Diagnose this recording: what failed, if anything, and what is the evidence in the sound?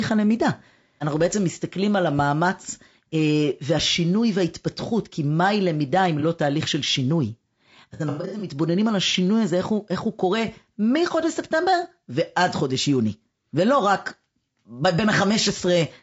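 At the codec stage, the speech sounds rough and grainy throughout, with noise between harmonics, likely from low-delay AAC compression (AAC-ELD) at a bitrate around 32 kbps.

AAC frame loss with concealment disrupted the network or decoder stage. The decoder's fill-in smears 6.20–6.24 s, and scattered gaps totalling 270 ms, the longest around a tenth of a second, roughen 7.94–8.47 s.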